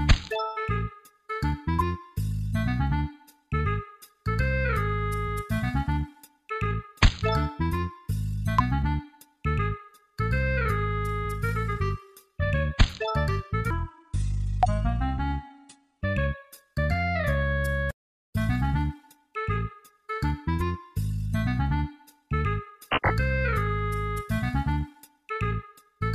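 From 13.70 to 16.01 s the audio suddenly drops deep and drags, running at 0.71 times its proper speed, about five semitones low, before snapping back. This section at the wrong speed is likely from that stretch being played against the wrong clock.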